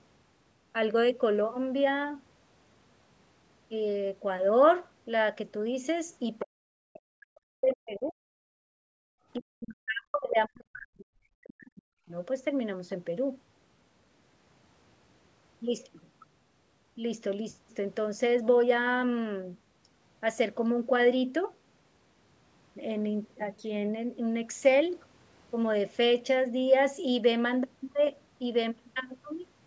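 From 6.41 to 8.2 s, and again from 9.37 to 12.14 s, the speech sinks by as much as roughly 40 dB. This is likely speech suppressed in double talk: the echo canceller mistook overlapping talk for echo. Between 8.48 and 9.09 s, only the room sound drops, by about 34 dB. That is background gated by the echo canceller, which clamped the microphone while the loudspeaker played and then released it. The call's band limit at 8 kHz is steady throughout and is not part of either fault.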